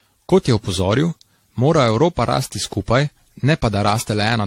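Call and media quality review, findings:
Generation loss, whole speech clip. Swirly, hollow texture with smeared consonant onsets, rougher than a single lossy pass would leave, and nothing above 16.6 kHz. Likely repeated AAC-LC re-encoding, around seven passes at rates near 64 kbit/s. Each decode and re-encode quantises on a shifted frame grid, so spectral holes and noise stack up. Worth tracing the transcode hops.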